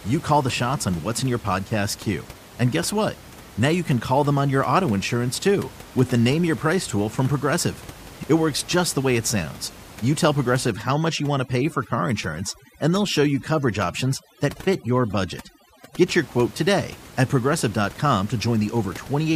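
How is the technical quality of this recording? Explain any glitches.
Two faults affect the speech, with steady room noise sitting about 20 dB below it.

At 7.55 to 7.59 s, just after "tool from", compressed frames are skipped. Roughly 20 ms of audio never reaches the output because those frames were missing or rejected as corrupt, so the speech jumps forward.

From 10.71 to 16.06 s, ending just before "your quote today at", there is overdone noise removal. The reducer pulls individual frequency bands down hard wherever they approach its noise estimate, removing quiet speech detail along with the room noise. Gaps fall to near silence dotted with twinkling artefacts.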